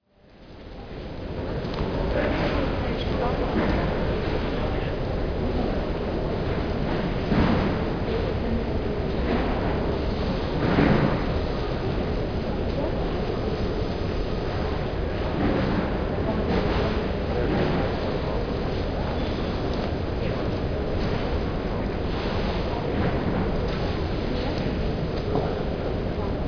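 Nothing here needs flagging: the sounds in the recording come across just as they should, with no technical faults anywhere along the way.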